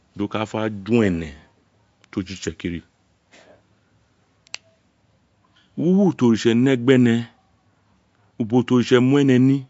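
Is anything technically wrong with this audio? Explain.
Yes. Throughout the speech, the treble stops dead at 7.6 kHz and the sound is watery and swirly, with chirpy, metallic s sounds. This is likely MP3 compression at a low bitrate, around 48 kbps, where the encoder cuts high frequencies and drops weak spectral lines that flicker between frames.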